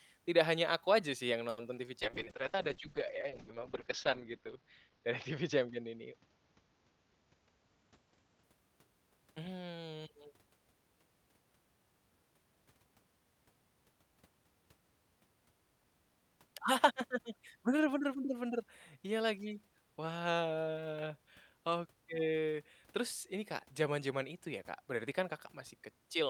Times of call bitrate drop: 2.03-8.49

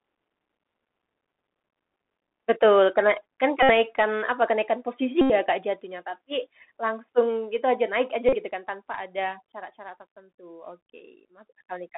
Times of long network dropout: none

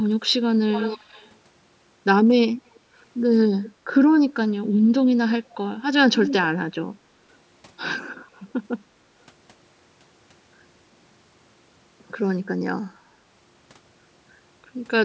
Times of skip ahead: none

